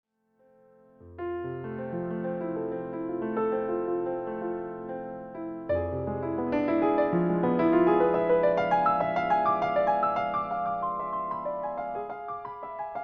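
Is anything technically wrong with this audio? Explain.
No, nothing here sounds technically off to me; the audio comes across steady and intact the whole way, with nothing that stands out as a problem.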